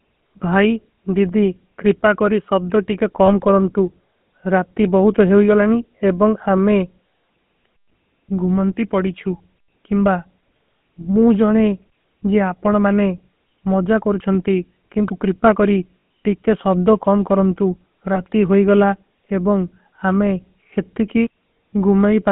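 The whole clip is speech through the GSM full-rate codec. Its sound fits the original 13 kbps GSM stream. The line passes only about 150 Hz to 3.5 kHz, so the speech is thin and muffled. The codec models the throat and mouth as a filter. It drives that filter with a sparse, evenly spaced pulse train. That coarse excitation gives a plain buzzy, gravelly grain on every stretch of speech.

There are lost GSM frames at three points. The first is at 3.26 to 3.30 s, a 20 ms dropout. The next is at 16.01 s, between "କରୁଛଂତୀ କିଂଦୁ କ୍ରିପା କରୀ" and "ଟିକେ ସବ୍ଦୋ କାମ କରଂତୁ". It lasts 40 ms, which fits two frames. The last is at 18.14 to 18.21 s, between "ଟିକେ ସବ୍ଦୋ କାମ କରଂତୁ" and "ହୋଈ ଗଳା", lasting 20 ms. Each time the decoder reuses the last good frame. The sound briefly freezes into a rough, metallic ring.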